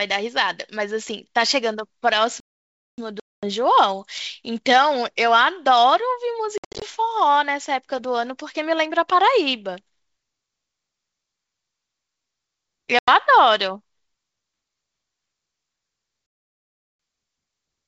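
At 2.40 s the speech stops dead for about 0.58 s, until 2.98 s. This playback stall likely comes from the player running short of data or being blocked. At 16.26 s a longer gap of about 0.73 s follows, ending at 16.99 s. Both times the sound simply halts, then resumes.

Packet loss on the ADPCM call cuts hard-edged holes at 3.20 to 3.49 s, 6.58 to 6.84 s and 12.99 to 13.09 s. About 230 ms, 190 ms and 90 ms drop out. The middle one is scattered, with its longest run at 70 ms. Each time the decoder's predictor and step size drift, so speech returns slightly distorted before settling.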